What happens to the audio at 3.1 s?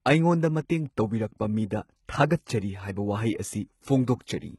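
At 3.1 s the speech has gritty, lispy s sounds and a metallic top that stops at 11.8 kHz, as it does throughout. The likely cause is heavy HE-AAC compression at a bitrate near 16 kbps, which rebuilds the treble from copied lower bands.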